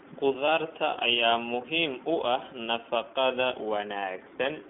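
Across the whole recording, the speech passes through the iLBC codec, a narrowband VoIP coder that handles each 20 ms frame of excitation on its own without drawing on the previous one. The line band runs from about 150 Hz to 3.4 kHz, so nothing above 4 kHz survives, and the damage is plainly audible. The voice sounds thin, slightly rough and synthetic, which fits iLBC's 15.2 kbps mode.

From 0.46 to 0.49 s, just before "ayaa muhiim u ah", iLBC frames are lost. The gap fits a single missing 20 ms frame. The decoder fills it by repeating the last pitch cycle blended with noise, so the dropout comes across as a brief held, faintly buzzy vowel rather than silence. Because each iLBC frame decodes independently, the voice returns cleanly right after.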